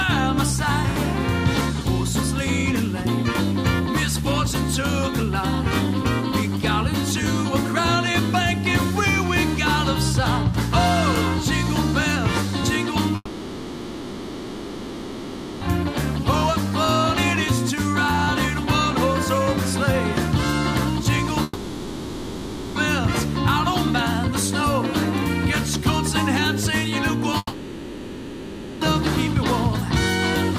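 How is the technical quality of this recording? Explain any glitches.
There are three gaps where audio goes missing, at 13.15 to 15.64 s, 21.43 to 22.78 s and 27.37 to 28.84 s. Each sounds like a long network dropout, likely: the last sound smears into a fading buzzy tail, then resumes with that stretch simply gone.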